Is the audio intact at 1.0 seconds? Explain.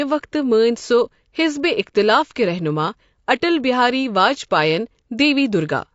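No. At 1.0 s, as throughout the clip, the speech sounds rough and grainy, with noise filling the gaps between harmonics. This is likely low-delay AAC compression. Its short frames resolve pitch poorly, and the damage fits a bitrate around 32 kbps.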